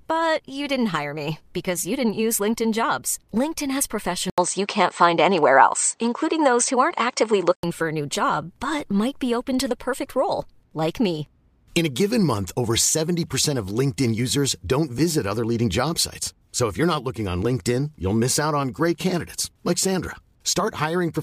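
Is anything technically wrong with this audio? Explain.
Yes. From 4.30 to 7.63 s, starting just before "for a new job", the speech turns duller and boxier. Nothing above 8.6 kHz comes through, the level shifts by about 5 dB, a faint new background noise appears well below the speech, and an 80 ms gap marks the change. This is likely an input switched to a poorer device partway through, to a narrower-band microphone or a headset call profile with its own tone and noise.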